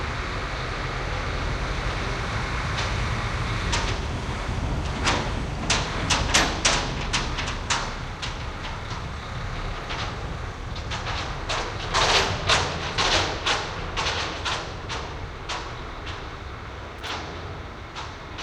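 Short irregular bursts of crackle cut through the sound at 10.73 to 10.75 s and 16.98 to 17.09 s: loose connector crackle, a worn contact making and breaking.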